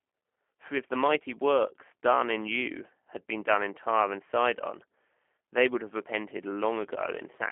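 Throughout, plainly audible G.729 codec damage makes the speech rough and synthetic, as fits 8 kbit/s coding; the spectrogram shows nothing above 3.7 kHz.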